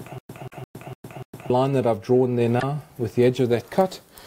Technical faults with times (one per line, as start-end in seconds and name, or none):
0.00-1.50 stutter with silent gaps
0.48-0.54 damaged data in a compressed stream